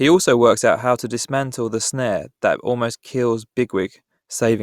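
No technical faults are audible.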